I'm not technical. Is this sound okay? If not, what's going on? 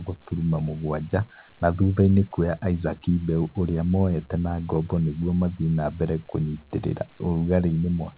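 Yes, nothing stood out as a problem when listening to this speech, which has the narrower, phone-call sound of audio that has gone through a call line.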